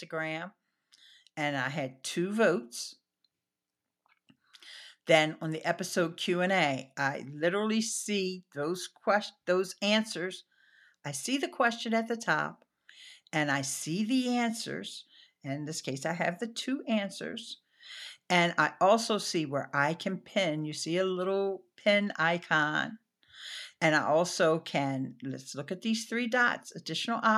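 From 0.1 s to 20.89 s, the automatic gain control judged the incoming speech too quiet and kept raising its gain, climbing about 8 dB over those twenty-odd seconds. This automatic gain rising is slow and steady rather than a sudden jump, so the speech and the background noise behind it swell together, growing louder in step with no change in their balance, and the room sound comes up as much as the voice does.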